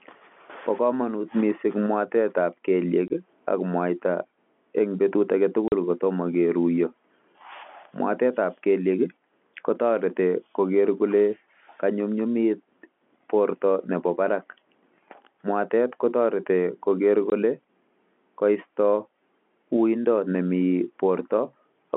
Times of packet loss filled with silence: 3.08-3.10, 5.68-5.72, 17.30

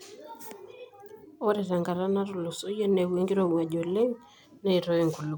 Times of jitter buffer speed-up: none

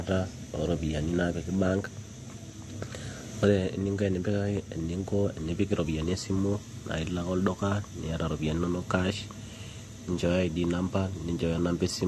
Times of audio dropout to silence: none

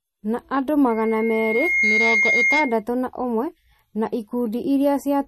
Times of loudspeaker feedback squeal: 0.89-2.83

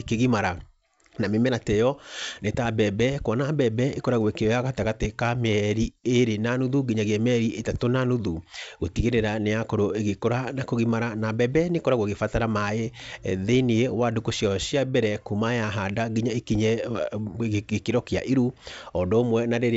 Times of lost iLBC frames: none

